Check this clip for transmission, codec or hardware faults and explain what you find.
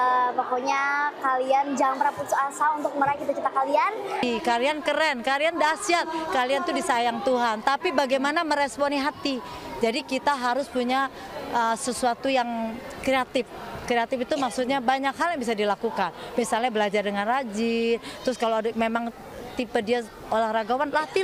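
Nothing in the transmission, codec or hardware path shows up as a fault anywhere in the clip.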